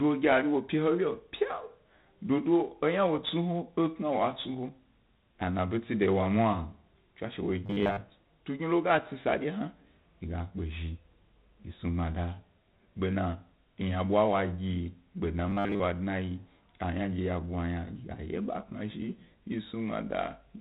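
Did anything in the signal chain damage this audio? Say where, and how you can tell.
Yes. 4-bit ADPCM compression runs through the whole clip, at the codec stage: a heavy gritty hiss rides on every loud syllable and harsh edges mark sharp onsets, with nothing above 4 kHz. Coarse 4-bit prediction steps that lag fast attacks cause this, and the sound fits a 32 kbps stream.

Robotic sound from repeated short buffers appears at 7.66 to 8.02 s and 15.50 to 15.80 s, the second just after "gbe dna", at the driver or buffer stage. A rigid metallic buzz at 100 Hz replaces most of the natural sound, likely from a 10 ms buffer replayed while fresh audio was dropped.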